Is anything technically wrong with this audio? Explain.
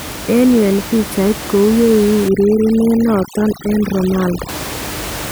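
Yes. From 2.29 s to 4.49 s the speech is hit by overdone noise removal. A noise reduction stage is working too hard on this stretch. Any frequency band that sits near its estimate of the noise gets pulled far down or cut out. The quieter parts of the voice are caught in that too. The background drops and breaks up into twinkling specks. The room noise stays about 12 dB below the speech.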